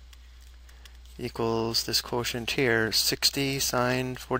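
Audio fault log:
No faults detected in this clip.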